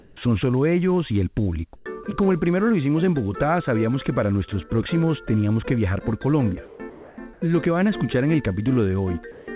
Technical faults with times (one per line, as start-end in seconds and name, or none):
0.00-0.17 comfort noise in place of the background
1.76-1.86 comfort noise in place of the background
1.84-1.86 onset clipped by the voice detector
6.66-7.42 sound chopped by the voice detector
9.32-9.48 comfort noise in place of the background